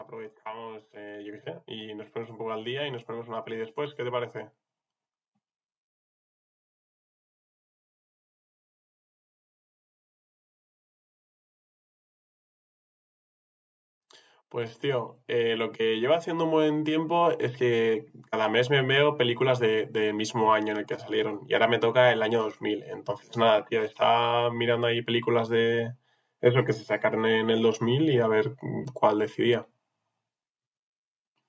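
From 0.44 to 4.37 s the automatic gain rising kicks in, lifting everything by about 8 dB, then again from 14.5 to 17.43 s by about 6 dB. The level control decided the input was too quiet, so voice and background swell up together over a few seconds.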